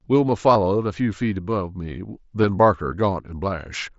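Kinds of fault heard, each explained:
concealed Bluetooth headset packet loss: Voice packets on the wireless link between headset and phone failed to arrive, and the receiver filled each hole by repeating the best-matching piece of the preceding waveform. At 0.55 s the patch lasts about 8 ms, which fits a single lost 7.5 ms frame, and it is nearly hidden. At 2.42 s the fill runs about 15 ms, suggesting two consecutive frames, a brief stretch of repeated sound within the mSBC wideband speech.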